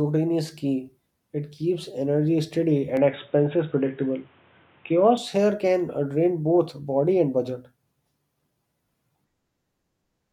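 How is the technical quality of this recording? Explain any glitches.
The recording has one clear glitch. From 2.97 to 5.17 s, after "keeps energy steady" and until "here can uh drain", the speech turns dull and boxy. Nothing reaches above 3.8 kHz. A faint new noise floor sits roughly 35 dB down. The loudness barely changes, and there is no gap at either switch. The likely cause is an input switched to a poorer device, a narrower-band microphone or headset profile, before the original returns.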